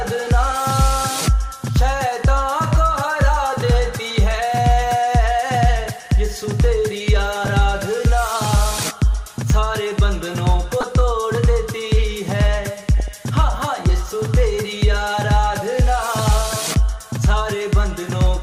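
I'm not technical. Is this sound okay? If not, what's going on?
No. The audio was squeezed hard, likely by MP2 compression, which drops the upper parts of the sound, so it comes across dull, gurgly and grainy throughout. There is also DAB burbling: weak reception let errors into the data, so short blips of noise break through briefly at 0.77–0.87, 7.44–7.47, 10.81–10.83 and 13.0–13.08 seconds.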